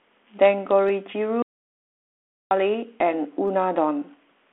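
Speech over a phone-band line (G.726 at 32 kbit/s, nothing above about 3.9 kHz). There's a repeated buffer at 0.88 s and again at 3.48 s: a tiny 5 ms chunk plays two and then three extra times. It comes across as a quick click-buzz, with no audio actually lost. From 1.42 to 2.51 s there's an audio dropout to silence, just over a second of dead silence with no room tone, most likely from the input link dropping out.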